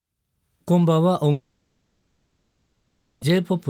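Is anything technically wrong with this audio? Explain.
Yes. From 1.31 s to 3.23 s there is a long network dropout, most likely caused by the stream failing to deliver about 1.9 s of audio. The receiver stretches the last speech it had into a buzzy, hissy tail that fades toward a faint, steady floor, and speech returns at 3.23 s with that stretch gone. On a spectrogram, the last harmonics smear into blurred, repeating bands that dim across the gap. The waveform shrinks to a low, even envelope.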